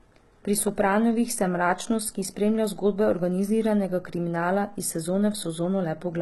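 From start to finish the speech sounds band-limited and smeared, with nothing above about 11.8 kHz and the thin, swirly texture of heavy compression, even though the file carries a generous bitrate. This is likely low-bitrate audio saved at a high bitrate: the sound points to an earlier very low-rate encoding, something like HE-AAC near 16 kbit/s, later re-encoded as high-rate MP3. The second pass cannot restore the discarded detail.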